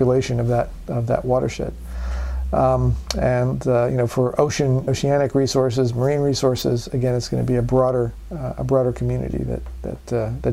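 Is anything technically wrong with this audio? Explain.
Yes. Lost LE Audio frames at 4.83–4.87 s and again at 9.31–9.34 s leave brief gaps of about 37.5 ms and 22.5 ms, which fits roughly five and three 7.5 ms frames. To cover each gap, the LC3 decoder repeated the last good spectrum with its phases scrambled by random signs. The missing sound is therefore replaced by a short, noisy smear of the preceding spectrum rather than by silence.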